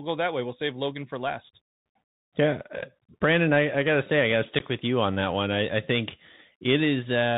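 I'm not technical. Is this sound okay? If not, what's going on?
No. A Bluetooth CVSD headset codec affects the whole recording. This is the basic, narrowband system headsets use for calls. Instead of sending the sound itself, it sends a stream of tiny up-or-down steps and adjusts the step size as it goes. Everything above about 4 kHz is lost, so the speech sounds muffled and phone-like. Loud, sharp sounds move faster than the steps can follow and distort, s sounds come out scratchy, and a grainy hiss sits under the speech. Here the damage is plainly audible.

There is also unconcealed Bluetooth headset packet loss from 4.59 to 4.61 s. The speech travels between headset and phone in small chunks, and a couple of them never arrived. Nothing filled the gap smoothly, so about 15 milliseconds of sound simply drop out with abrupt edges, and with this headset codec the speech returns quieter for a moment before recovering.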